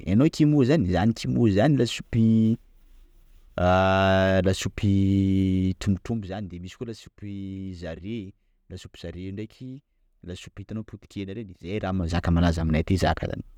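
Zipper noise occurs from 5.85 to 6.34 s as the speech drops roughly 15 dB, and from 11.63 to 12.20 s as it rises back. The gain moves in unsmoothed 1 dB steps, around fifty per second. Each step leaves a small click, heard as a rapid zipping.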